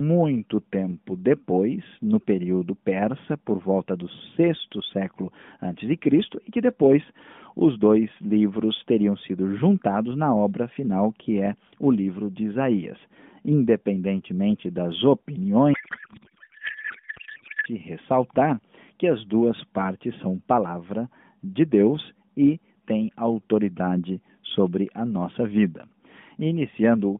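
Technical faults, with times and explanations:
15.74 to 17.66 s, codec payload misread: The speech turns into garbled noise and warble that barely follows the talker, for almost two seconds. The decoder is unpacking the AMR frames with the wrong layout. It pulls bits from the wrong fields, so it rebuilds nonsense sound from data that still looks valid. The sound points to octet-aligned frames being read as bandwidth-efficient. Clean speech returns once the packing matches again, and it is still confined to the narrow phone band.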